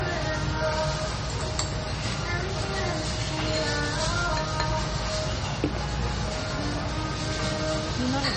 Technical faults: low-bitrate audio saved at a high bitrate

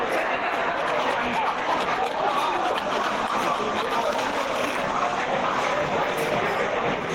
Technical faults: gain pumping

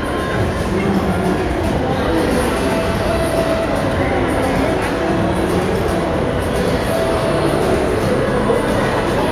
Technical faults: none

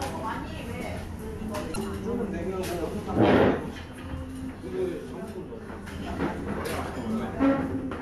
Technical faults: damaged data in a compressed stream

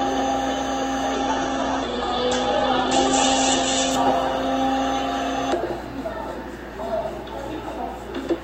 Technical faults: call bitrate drop

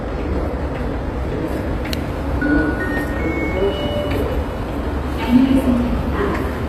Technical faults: HE-AAC compression

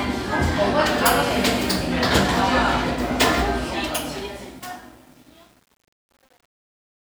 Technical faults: truncation distortion on a fade

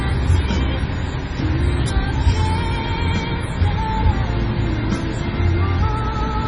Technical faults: MP3 compression

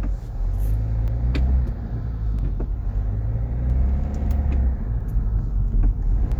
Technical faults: clock drift buffer slips

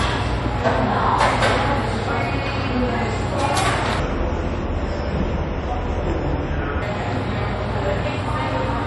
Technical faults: MP3 compression; section at the wrong speed

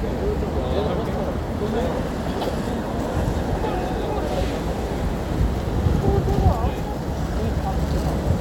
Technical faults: none

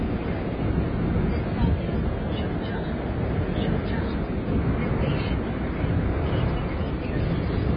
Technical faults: AAC compression

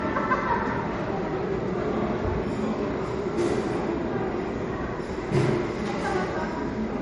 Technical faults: low-bitrate audio saved at a high bitrate

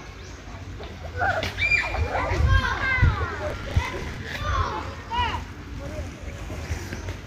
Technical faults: processor overload crackle

